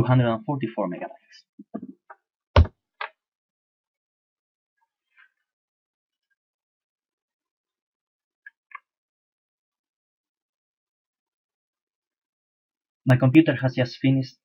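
From 1.01 to 1.80 s the audio speeds up about 5.8% and rises roughly 98 cents, nearly a semitone, then snaps back, likely a drift correction step from clock-matching software. Between 13.10 and 13.84 s you get four tiny ticks, the longest about 1.5 ms, which are classic CD scratch ticks from damaged, unrecoverable data.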